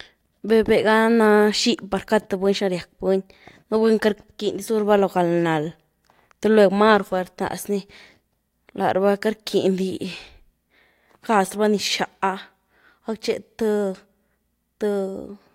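No audible technical faults.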